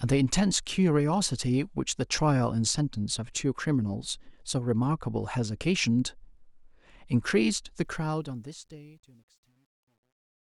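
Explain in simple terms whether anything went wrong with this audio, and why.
Yes, something went wrong at the end. The speech fades out starting around 7.8 s, and from 7.84 s to the end the fade shows truncation distortion on a fade. The volume stage kept too few levels of detail, consistent with about 11 bits and no dither, so as the sound gets quieter it is rounded into coarse steps. From 8.69 s to 10.44 s it turns gritty instead of thinning out cleanly.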